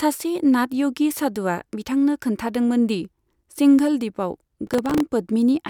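From 4.67 to 5.00 s the speech picks up processor overload crackle: around ten buffers of roughly 3 ms miss their deadlines, each replaying stale audio, so you hear gritty tearing.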